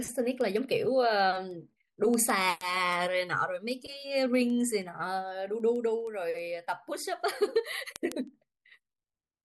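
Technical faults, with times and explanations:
0.25–9.37 s, word clock ticks: a steady train of sharp ticks, about one every 0.15 s and around fifty in all, runs under the speech for nearly the whole clip. The receiving device is clocked independently of the digital link feeding it, with the two clocks differing by something like 150 ppm. Each time they drift a full sample apart, one sample is dropped or repeated, and that single-sample break in the waveform is heard as a tick.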